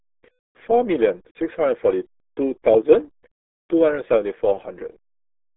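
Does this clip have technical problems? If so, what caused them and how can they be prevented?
Yes: throughout, the speech runs through the RealAudio 14.4 codec, an 8 kbit/s dial-up-era coder squeezing everything into roughly 300 Hz to 3.5 kHz, so it's muffled and gargly. Prevent it by encoding at a modern, higher-bitrate wideband codec instead.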